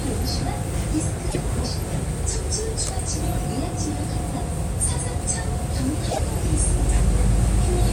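At 1.29 s the audio stutters. This is repeated frames: a block of about 52 ms, which fits two compressed frames, plays one extra time. At 6.10 s a shorter block of about 26 ms, which fits a single frame, repeats twice more. It sounds like a quick triple stammer. Each stutter stretches the audio by about 52 ms.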